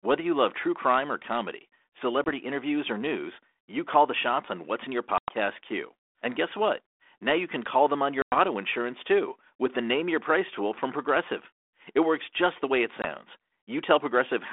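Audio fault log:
2.24–2.26, 5.18–5.31, 8.22–8.39, 13.02–13.06 s, packet loss on an ADPCM call: abrupt silent gaps, then slightly distorted speech while the decoder's predictor and step size resynchronise.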